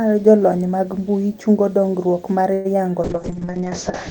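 At 2.53 to 2.78 s, a call audio freeze: packets were likely delayed and the jitter buffer ran empty, so the last sound stretches into a fading buzz or hiss before the speech resumes with nothing lost. From 3.03 s to the end, a call bitrate drop takes the encoder from 32 to 6 kbps and narrows the bandwidth from 20 kHz to 8 kHz, leaving the speech coarse and muffled.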